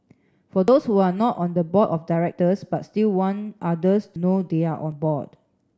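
At 0.68 s the speech jumps forward, skipping a few hundredths of a second. At 4.16 s a longer skip of about a tenth of a second cuts into the sound, and at 4.92 s another short jump follows. There is no gap of silence at any of them. Each is likely a dropped buffer (overrun): samples were overwritten before being read, and the audio on either side was spliced directly together.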